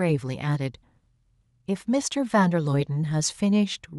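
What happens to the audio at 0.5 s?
Nothing goes wrong at 0.5 s; the speech plays through that moment intact.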